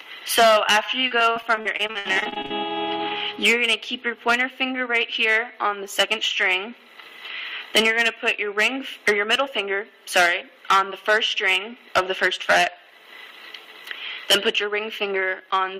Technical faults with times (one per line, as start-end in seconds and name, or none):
1.07-2.52 repeated packet loss (robotic sound)